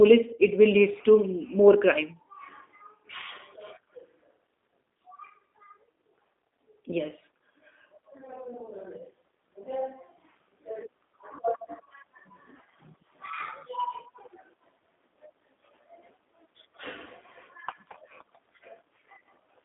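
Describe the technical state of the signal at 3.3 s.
At 3.3 s the speech sounds thin, slightly rough and synthetic, with nothing above about 3.7 kHz and a narrow telephone band of roughly 250 Hz to 3.6 kHz. This G.729 codec damage, present throughout, comes from low-rate speech modelling that fits an 8 kbit/s G.729A encoder.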